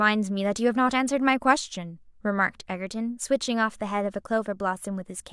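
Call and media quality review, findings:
No faults found in the speech signal; no audible defect in the transmission or playback path needs action.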